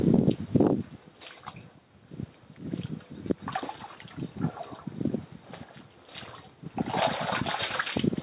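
Gain pumping runs through the whole clip. The gain ducks by around 10 dB under each loud sound. Likely cause: input gain set far too high, with a fast limiter clamping it. Nothing reaches above 4 kHz, which fits a narrowband telephone codec on the call path.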